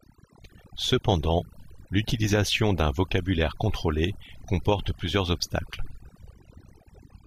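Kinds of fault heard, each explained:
Overdone noise removal: noise reduction set far too strong suppresses any frequency band near its noise estimate, so the background drops with twinkling specks throughout. A spectrogram shows scattered isolated dots and ragged, gappy speech harmonics.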